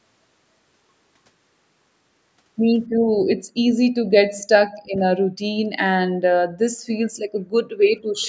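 A speech clip in which two brief, very faint repeats of the voice surface, one at 4.38 to 4.44 s and another at 8.21 to 8.28 s. Each trails the original sound by about 277 ms and sits far below it, roughly 30 dB down. This is likely echo leak: the far end's loudspeaker output reached its microphone and its echo canceller let these fragments slip back.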